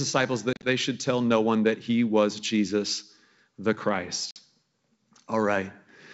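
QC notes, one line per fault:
0.53–0.67 s, packet loss on an ADPCM call: about 80 ms of audio drop out in gaps spread over 100 ms, the longest 40 ms, which points to roughly seven lost packets. The missing stretches become hard-edged silence, and the decoder's adaptive predictor and step size no longer match the sender's, so the speech re-enters just before "should tell no one" slightly distorted.
4.31–4.41 s, packet loss on an ADPCM call: about 50 ms go silent, likely around five packets. The same predictor and step-size mismatch leaves the returning G.722 wideband speech slightly distorted before the decoder realigns.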